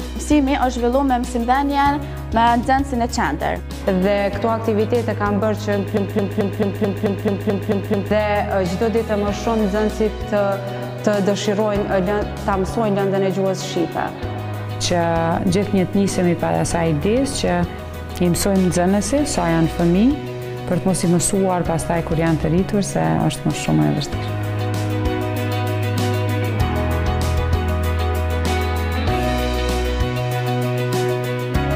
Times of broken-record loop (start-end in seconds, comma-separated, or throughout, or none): 5.97-8.11